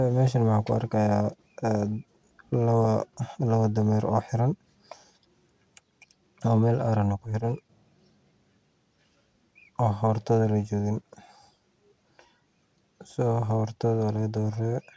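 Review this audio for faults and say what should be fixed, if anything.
Nothing stood out on listening, so there is nothing here that needs fixing.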